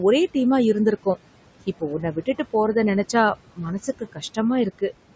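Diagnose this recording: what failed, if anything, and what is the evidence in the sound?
Noise suppressor artifacts, in the call processing, throughout. The suppressor treats steady background as noise frame by frame. It cuts it by about 18 dB, so it sinks between words and rises under them.

Speech cut by the noise suppressor, at 2.01 to 2.54 s and 3.87 to 4.37 s. Soft speech was mistaken for noise and dropped about 12 and 14 dB. Those moments sound swallowed.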